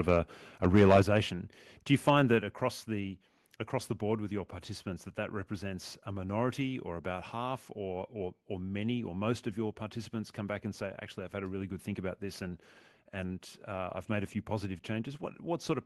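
Speech, with microphone overload from 0.65 to 1.01 s: the loudest parts have their tops flattened, around one sample in twenty, likely because input gain drove the converter about 8 dB past its limit. Microphone volume stepped down at 1.02 s: voice and background fall together by about 6 dB in a single step, likely as call software lowers the device's input level right after that clipped stretch. The audio also carries the coding texture of a call path, with content above 12 kHz missing, which fits Opus at around 20 kbps.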